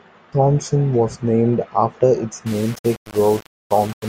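From 2.46 s, after "was named after its", grit tracks the speech and vanishes in pauses, unlike steady hiss. This is low bit depth without dither, likely around 5-bit rounding.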